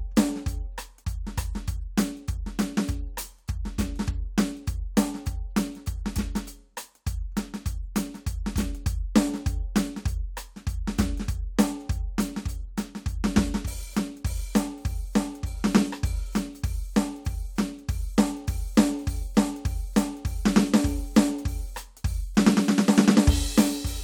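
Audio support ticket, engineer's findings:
Listened through the music clip and nothing's wrong with it, so there's nothing to log on this ticket.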